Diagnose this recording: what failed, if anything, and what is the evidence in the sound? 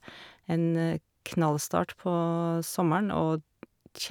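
Nothing stood out on listening to the speech: no stage of the chain showed any audible sign of having failed.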